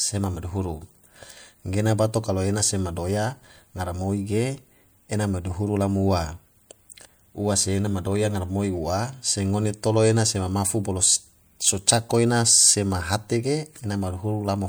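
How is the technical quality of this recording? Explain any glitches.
One glitch stands out: a corrupt frame decoded at 12.09 to 12.11 s, just before "ena sema hate". Flipped bits in what sounds like a single compressed frame were decoded anyway, so misread gains and codes put energy at wrong frequencies. The result is a brief chirp, squeak, blip or burst of noise peaking around -20 dBFS.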